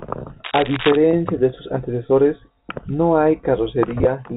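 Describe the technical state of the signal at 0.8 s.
A worn cable or connector being moved, with its contact resistance jumping about, likely causes cable scratch noise from 0.44 to 0.97 s, just before "de sus antecesores no": dense, uneven rustling scratches nearly as loud as the speech.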